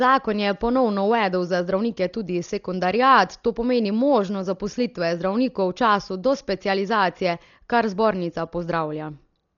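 From start to finish the speech sounds dull, with nothing above 7 kHz and rough, fluttery hiss around tones. That's likely Dolby Digital compression, heavily damaged at what sounds like about 40 kbps.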